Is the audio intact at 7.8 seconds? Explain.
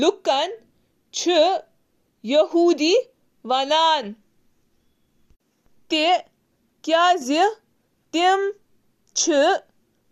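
Yes, the audio is intact at 7.8 seconds, with no audible dropout, click, distortion or other technical fault at that moment.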